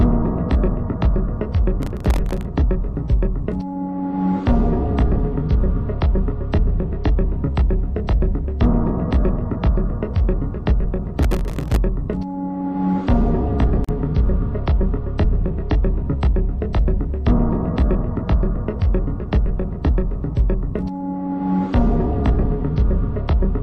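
Processor overload crackle runs from 1.82 to 2.45 s and again from 11.19 to 11.76 s: dozens of tiny dropouts to silence in a row, consistent with very short buffers of around a millisecond and a half repeatedly missing their deadlines, tear the sound into gritty crackle. A gap at a join of encoded pieces opens at 13.84 s, a 42 ms hole where untrimmed encoder delay and end padding break continuous audio before it resumes.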